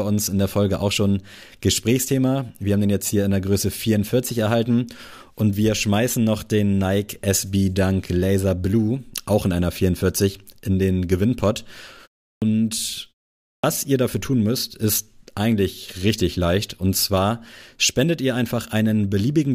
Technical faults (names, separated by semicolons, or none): clipped start after a pause